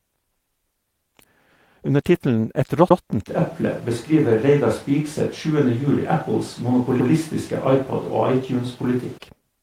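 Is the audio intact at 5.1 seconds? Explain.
No. From 3.28 s to 9.18 s, a span that includes 5.1 s, the pickup is likely a switch to a distant microphone, with the close microphone's signal missing and a more remote one carrying the speech. The speech turns roomy and hollow, with thinner low end and background noise roughly 25 dB below the speech. The level stays about the same, so the change is heard as a sudden shift in tone and space.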